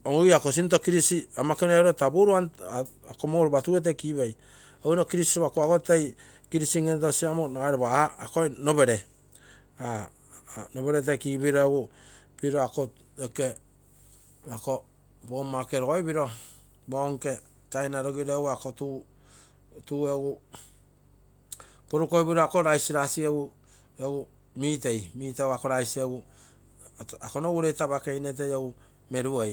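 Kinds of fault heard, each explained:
No kinds of fault are heard in this speech.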